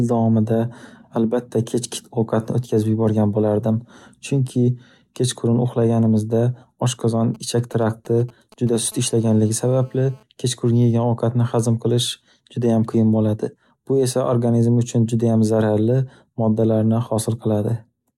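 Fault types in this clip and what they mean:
GSM signalling bursts: 7.35 to 8.78 s, after "uxlaganimizda oshqozon", a nearby 2G phone's radio bursts get rectified into galloping ticks and short 217 Hz buzzes, well below the speech.
GSM phone buzz: 8.92 to 10.23 s, a phone in a call pulsing 217 times a second is rectified into a steady, raspy, harmonic-rich buzz about 32 dB below the speech.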